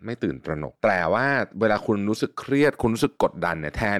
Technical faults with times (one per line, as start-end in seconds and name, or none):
1.72 DC step